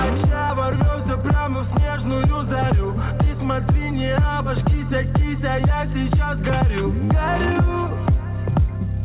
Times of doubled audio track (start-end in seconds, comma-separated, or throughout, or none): none